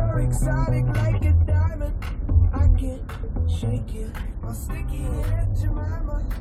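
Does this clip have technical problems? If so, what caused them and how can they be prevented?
No, there is no audible technical fault in this recording, so there is nothing to trace back or prevent.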